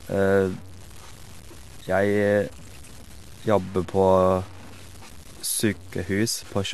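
From start to finish the speech carries a gritty distortion that follows the signal, sitting roughly 25 dB below it. This is likely low bit depth without dither, fitting truncation to 7 bits. Quiet passages turn grainy. A zoomed waveform shows stair-stepped levels, and a spectrogram shows broadband grit that tracks the sound.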